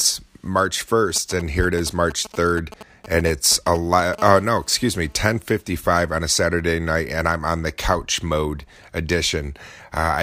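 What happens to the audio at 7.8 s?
Nothing goes wrong at 7.8 s; the speech carries on intact through that moment, with no dropout, click or distortion.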